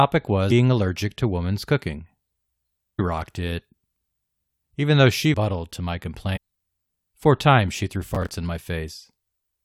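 Damaged data in a compressed stream produces brief glitches at 0.50–0.52 s, at 2.98 s just before "rocked it", at 5.33 s between "even though she" and "to my", and at 6.35–6.38 s after "to my". Each time the decoder misreads corrupt frames, loses sync and searches for the next frame header.

From 8.09 to 8.35 s, processor overload crackle puts a gritty tearing over the speech. Buffers of around 10 ms repeatedly missed their deadline, and each miss replayed a hard-edged scrap of old audio. The result is a sustained burst, not one blip.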